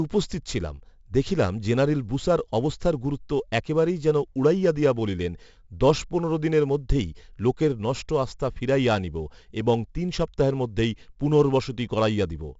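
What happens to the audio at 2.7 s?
4-bit ADPCM compression, running through the whole clip, quantises each speech sample as a coarse predicted step, leaving level-following gritty hiss, smeared attacks and nothing above 7.7 kHz.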